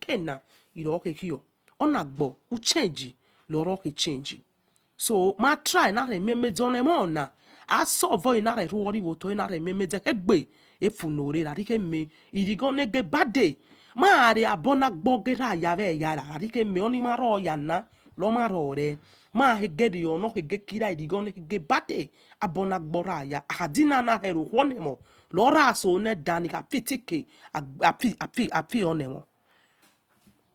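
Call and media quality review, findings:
Low-rate Opus compression, likely in music (CELT) mode near 24 kbps, throughout: band energy kept, fine detail replaced by folded or noise-filled bands; speech sounds grainy, rough, noisy up to about 20.2 kHz.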